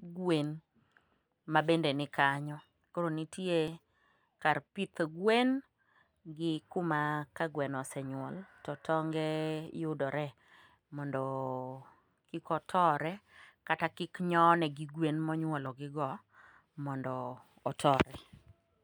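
Audio missing between chunks at 3.68, 9.67 and 15.66 s: tiny skips in the speech every 6 s, each losing only a few milliseconds, with the two sides butted together. This is likely a recorder dropping audio as it closes one 6 s chunk and opens the next.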